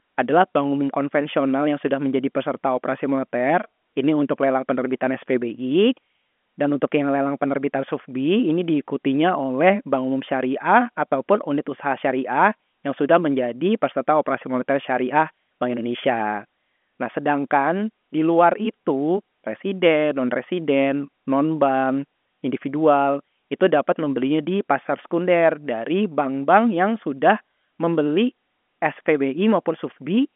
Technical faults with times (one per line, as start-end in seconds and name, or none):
none